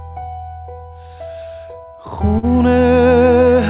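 Clock drift between sender and receiver runs throughout: the sender's clock is a few percent slow, so the jitter buffer keeps draining and the receiver patches it, leaving small timing hiccups at uneven intervals. From 2.38 to 2.46 s, a short stall from a late packet empties the buffer, and about 44 ms of stretched sound fills the gap, so a sound is held too long with a slight buzz or dip before playback resumes with nothing lost. All of this comes through a call path with no content above 4 kHz, which fits G.711 mu-law coding.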